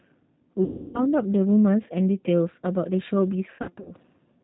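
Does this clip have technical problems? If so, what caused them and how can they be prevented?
Yes. Two problems are audible.

G.729 codec: The whole clip is narrowband, with nothing above 4 kHz. The speech sounds rough and slightly synthetic. That fits an 8 kbit/s G.729A codec. It rebuilds the voice from a vocal tract filter, a pitch predictor and a few pulses per frame. A wideband codec such as Opus would avoid this.

VoIP packet loss concealed by the speech codec: From 0.64 to 1.06 s, about 300 ms of audio is missing. The decoder stretches its last sound into a fading buzzy tone or coloured noise. From 3.50 to 3.95 s, shorter gaps are scattered, with the longest run lasting 90 ms. These give brief distortions, and the voice stays weak as it recovers. A steadier network path, a well-sized jitter buffer and forward error correction would prevent this.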